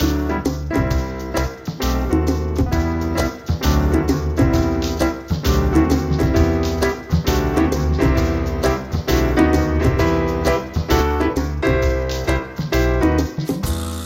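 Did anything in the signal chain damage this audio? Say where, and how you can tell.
Yes: from 3.01 to 11.01 s a doubled audio track repeats everything about two seconds late at similar loudness, starting and stopping abruptly, likely from a duplicated capture path or edit.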